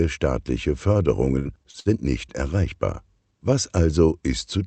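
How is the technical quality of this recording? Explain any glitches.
Technical quality takes a real hit in one stretch. Between 1.39 and 2.01 s there's repeated packet loss with a robotic sound. Four holes open up, the longest 59 ms. Each is patched by stretching the last bit of sound, so about a third of that stretch comes out choppy. The top end of the whole clip stops around 8 kHz, which fits a call codec like Opus running at roughly 64 kbps.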